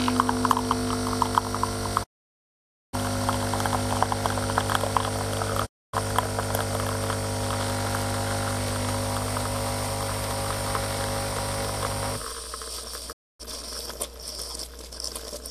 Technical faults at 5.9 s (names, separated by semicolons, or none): digital broadcast dropout